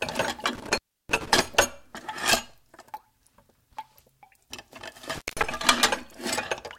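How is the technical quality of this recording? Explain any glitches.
The recording suffers from an intermittent contact, at 0.55 to 1.28 s (open about 0.32 s) and 5.12 to 5.44 s (open about 0.18 s). A loose connection briefly breaks, so the sound drops to faint hiss with crackle at each edge. The waveform shows near-flat gaps bordered by spiky clicks, and the spectrogram shows broadband vertical streaks.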